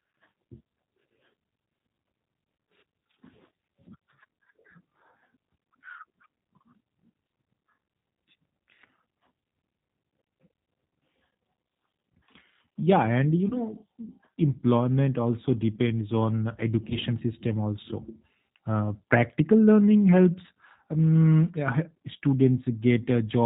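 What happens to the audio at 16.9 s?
Between 16.90 and 16.97 s, right after "employment also depends on" and before "system also", there is VoIP packet loss concealed by the speech codec. One 10 ms frame was lost, and the decoder filled the gap by repeating its last pitch and vocal tract filter at falling gain. The result is a brief buzzy, slightly smeared tone that dips in level. Because each frame builds on the previous one, the sound stays weak for a few tens of milliseconds after the packets return. On a spectrogram, the harmonics run flat and unchanging for that span before fading. In the waveform, near-identical pitch cycles shrink in amplitude.

The whole clip also carries plainly audible G.729 codec coding. This low-rate speech codec rebuilds the signal from a filter and a few pulses per frame, which gives it a rough, synthetic edge. On a spectrogram, all energy stops at 4 kHz.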